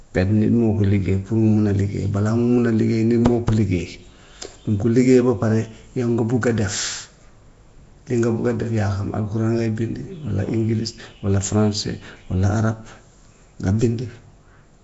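From start to finish the speech carries a rough, hissy halo and a smeared, underwater quality, with nothing above about 7.7 kHz. The damage is plainly audible and points to Nellymoser compression, likely the Flash-era Asao codec at a rate that fits around 32 kbps. It codes short blocks at a fixed bit budget, so quieter bands get nothing and are refilled with noise, which produces the hiss and blurring heard here.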